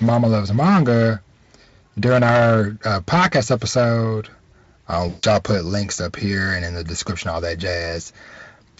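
Hard clipping runs throughout: the signal is overdriven by about 11 dB, so a few percent of samples are cut flat, giving harsh fuzz on louder speech. At 5.09 to 5.24 s, VoIP packet loss concealed by the speech codec causes a 140 ms dropout, fitting about seven 20 ms Speex frames; the decoder extrapolates a fading buzzy tone or coloured noise.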